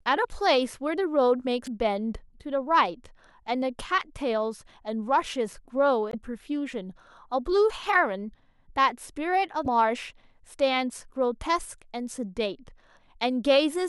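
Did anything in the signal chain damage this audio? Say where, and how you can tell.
Yes, damaged data in a compressed stream hit the codec stage. Corrupted bytes made the decoder misread frames and lose sync until the next frame header, giving brief glitches in the speech at 1.63–1.68 s, 6.10–6.15 s and 9.63–9.67 s, each about 40 ms long.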